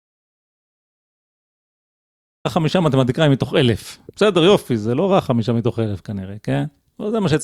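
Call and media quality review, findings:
Audio dropout to silence, 0.0 to 2.45 s. Gap already under way when the clip starts. Dead silence, no room tone at all. Speech cuts in abruptly mid-flow at 2.45 s. Likely cause is input loss upstream of the encoder: a disconnected capture device, a failed link or a stray mute. The recorder kept writing silence through the gap. Speech from that span is unrecoverable.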